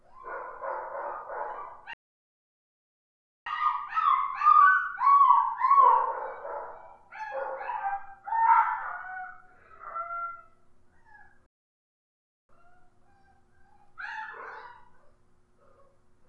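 At 1.93 s the sound drops into silence until 3.46 s, then picks up exactly where it left off. That's a rebuffering stall: the player ran dry of downloaded audio and waited for more, adding about 1.53 s without losing anything. It happens again from 11.46 to 12.49 s, a shorter gap of about 1.03 s, with the same seamless resume.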